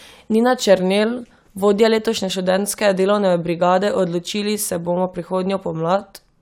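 No technical faults occur at any point in the recording, so there is nothing to describe in time order.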